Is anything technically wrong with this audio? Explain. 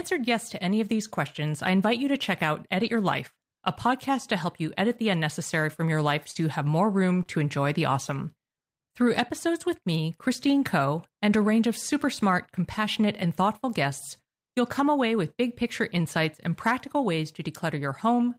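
Yes. Three stretches of this speech sound briefly rough and noisy. The first is at 2.81 to 2.95 s, right after "you to check out", then 6.35 to 6.37 s, after "unnecessary from your life" and before "you have more", and 7.15 to 7.21 s. Each is a lost packet rebuilt from error correction. Packets went missing, and the decoder played the low-bitrate copies carried in the following packets, so nothing drops out. The copies are coarser, and their highest frequencies have to be estimated.

Two other moments sound like a quick smear or wobble. The first is at 6.31 to 6.37 s, overlapping the rebuilt stretch there. The second is at 7.23 to 7.27 s, just before "enjoy the awesome". These are short concealed packet loss. About 40 ms and then 20 ms of audio arrived too late. The receiver filled each gap by extending the preceding sound and then blended back into the real signal.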